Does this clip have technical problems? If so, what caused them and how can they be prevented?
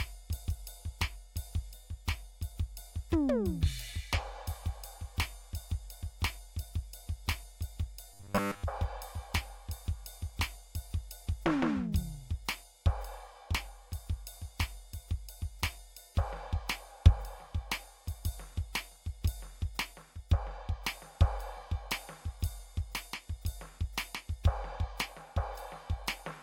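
Yes. From 8.14 to 8.65 s the music turns into a rigid, metallic buzz pitched at 100 Hz, roughly tracking the original sound but losing its natural tone. This is robotic sound from repeated short buffers, likely caused by audio arriving too seldom, so the playback software repeated the last 10 ms chunk, which fits a buffer of that length, while most of the real audio was skipped. Larger buffers or steadier delivery would prevent it.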